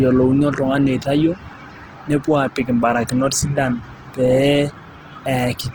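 From start to end the speech carries plainly audible damage of the kind left by Opus compression, likely in its CELT music mode. The band runs nearly full width, with nothing above 20.2 kHz, yet the detail within it is coarse: voiced tones sound grainy and rough, as the encoder rebuilds starved bands from copied or noise-like content. That degree of roughness fits a bitrate near 16 kbps.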